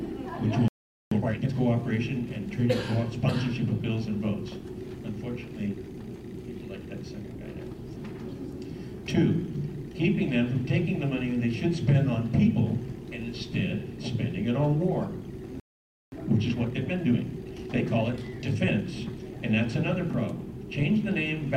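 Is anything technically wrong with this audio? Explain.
Yes. There are two playback stalls, each followed by time-compressed catch-up.

Playback stall: the player most likely ran short of buffered data, or its output thread was held up, so nothing reached the output until it recovered. The sound cuts off mid-flow and leaves a gap of silence. This happens from 0.68 to 1.12 s, about 0.43 s, and again from 15.60 to 16.12 s, about 0.52 s. Each time the audio then resumes.

Time-compressed catch-up: after each stall the player works off its backlog by dropping short slices of audio and cross-fading across the joins. This speeds playback without shifting pitch. From 1.12 to 1.53 s it runs at double speed, so the sound is clearly rushed. From 16.12 to 19.12 s it runs at 1.15 times normal speed, which gives a milder hurry over three seconds.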